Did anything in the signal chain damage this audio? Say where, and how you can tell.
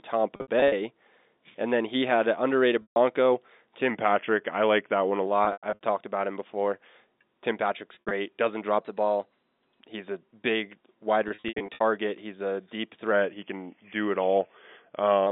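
Yes. At the network stage, packet loss with pitch repetition occurs at 0.36–0.72, 2.82–2.96, 5.45–5.79, 7.95–8.11 and 11.28–11.81 s. Missing stretches, the longest about 60–140 ms, become a held, buzzy repeat of the last pitch period that fades out, rather than the hard silence of a plain dropout.

At the buffer stage, a drift correction step is the likely cause of three sections. From 3.90 to 5.27 s and from 13.12 to 15.27 s, the audio runs about 6% slow and drops about 110 cents. From 8.81 to 9.80 s it runs 6% fast and rises about 106 cents. Speed and pitch move together and then snap back, which distinguishes this from a pitch shift alone.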